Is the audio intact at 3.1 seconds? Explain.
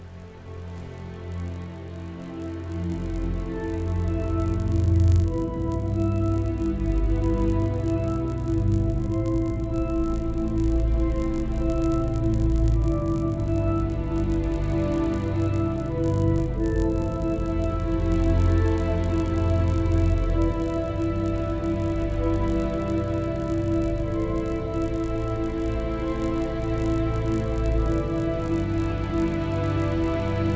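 No. At 3.1 seconds the resampler restarted on every block, as it does throughout. Each 20 ms block was converted from 48 kHz to 16 kHz on its own, so every block edge carries a small error. This gives a 50 Hz buzz whenever sound is present.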